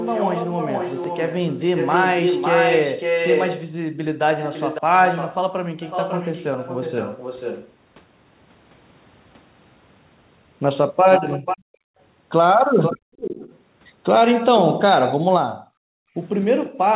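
From the start to 7.72 s, a second copy of the speech trails the original by about 554 ms at nearly the same strength, about 5 dB down. This is an echo leak. The far end was likely playing the call on a loudspeaker, and its echo canceller let part of what the microphone picked up back into the return path.

From 5.5 to 5.77 s, the room sound drops away by as much as about 40 dB for roughly a third of a second, then comes back. This is background gated by the echo canceller. While the loudspeaker was active, the canceller pulled the microphone down hard, and the ambience returned once it released.

The echo leak returns from 11.11 to 14.81 s. This time the delayed copy sits about 489 ms behind, again only about 5 dB below the speech, and the likely cause is the same incomplete cancellation of loudspeaker pickup. From 11.33 s to the end of the clip, the background is gated by the echo canceller again, with dips of up to about 40 dB. 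The room sound dips or drops out.

At 16.65 to 16.7 s, a final brief trace of echo leak appears. It sits about 489 ms late and much fainter, about 20 dB down, and is likely a last scrap of loudspeaker sound that the canceller missed. Throughout, the audio carries the narrow telephone band of G.711, with nothing above 4 kHz.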